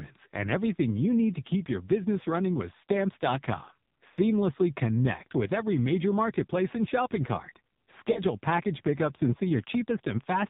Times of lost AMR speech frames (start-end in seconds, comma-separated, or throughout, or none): 4.14-4.17, 8.12-8.20